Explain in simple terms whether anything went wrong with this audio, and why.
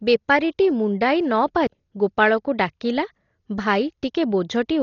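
Yes, this speech was likely squeezed by heavy Dolby Digital compression throughout, which removed everything above 6.9 kHz, leaving it dull, muffled and roughly fluttering.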